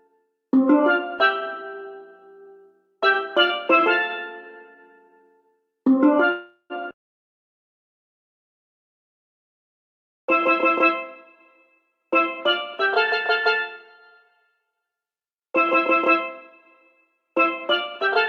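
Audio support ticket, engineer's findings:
Call audio freeze, 6.31–6.73 s: last sound extended as fading buzz or hiss, ending in about 100 ms of silence. Likely jitter buffer underrun from delayed packets. Nothing lost; adds 384 ms delay.

Jitter buffer speed-up, 17.21–18.12 s: audio runs at 106% speed, same pitch, sounds hurried. Receiver cut short pitch-period pieces, around 70 ms total, to shrink excess buffered delay.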